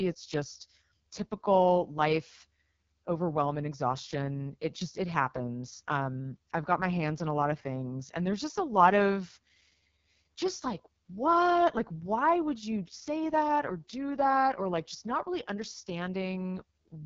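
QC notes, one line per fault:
Throughout: AMR wideband (HD Voice) codec. The speech sounds rough and raspy for the whole clip, and the codec damage is heavy. Nothing is heard above about 7.3 kHz. The codec models speech up to 6.4 kHz as pulses driving a vocal-tract filter, and fills the top band with shaped noise. At this bitrate the pulses are coarse, so the model cannot track the voice finely. The harshness fits the lowest 6.6 kbit/s mode.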